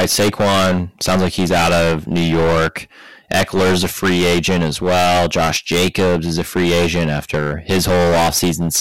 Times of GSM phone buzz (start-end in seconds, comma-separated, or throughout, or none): none